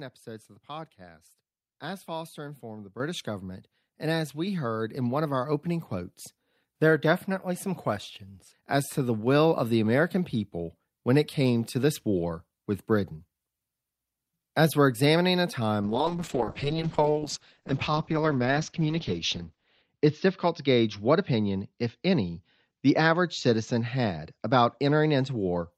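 A speech recording with two faults. At 3.0 s, between "informed the" and "government and as", the microphone volume is stepped up. The call software judged the input too quiet and raised the device gain in one jump of about 7 dB. The voice and the background noise get louder together, mid-phrase, with no fade. The level then stays at the new height. From 15.83 s, just after "we're examining a", there is a call bitrate drop that lasts to the end of the clip. The bandwidth estimate fell, so the encoder was told to spend far fewer bits. The sound turns rough and watery. The top end is cut, with the audio band shrinking from 20 kHz to 8 kHz. This fits a fall from around 48 kbps to 8 kbps. The worst quality holds for about 4 s.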